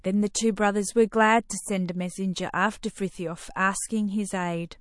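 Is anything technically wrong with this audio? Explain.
Yes. Throughout the speech there's plainly audible MP3 compression, likely from a starved bitrate around 48 kbps. The encoder flickers weak frequencies on and off, giving a watery, swirly sound.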